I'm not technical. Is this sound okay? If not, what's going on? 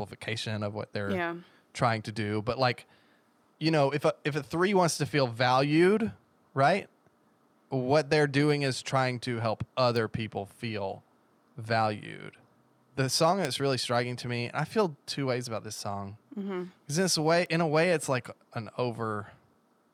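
No. There are three bit error spikes, single sharp ticks at 9.96 s after "is trying to help", 13.45 s before "really striking to me", and 17.46 s before "in a way it's". Each is one or a few corrupted digital values that jump and snap straight back.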